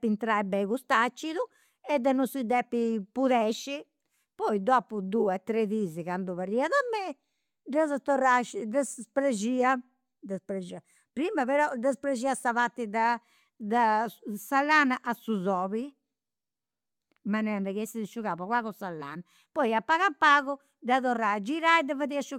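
No technical faults can be heard, so there are none to describe in time order.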